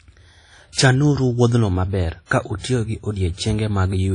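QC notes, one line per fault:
Throughout, WMA compression: washy, ringing speech with a hiss that breathes with the signal and nothing above 10.1 kHz, likely a low-bitrate WMA encode around 32 kbps.
2.26 to 2.31 s, pre-echo: just after "wuodhno maber", a 52 ms hiss runs ahead of a smeared attack, as quantisation noise spreads into the quiet before it.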